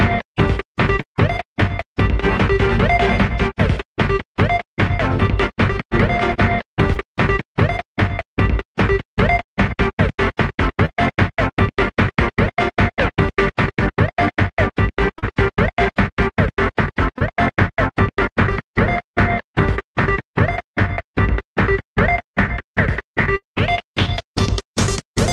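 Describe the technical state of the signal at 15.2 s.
A brief smear, like a short wobble, runs from 15.19 to 15.24 s. This is short concealed packet loss: about 40 ms of audio never arrived in time, so the receiver extended the preceding sound to fill the gap, then blended back into the real signal.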